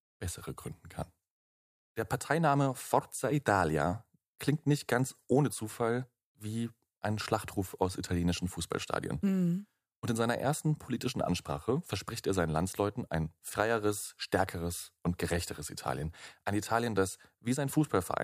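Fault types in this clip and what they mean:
No faults can be heard.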